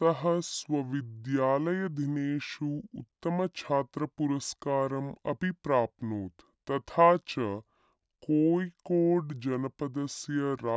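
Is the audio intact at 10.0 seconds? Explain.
No. At 10.0 seconds, as throughout the clip, the speech sounds slow and low, about seven semitones down at two-thirds speed: a wrong sample rate, with 24 kHz audio played at 16 kHz without conversion.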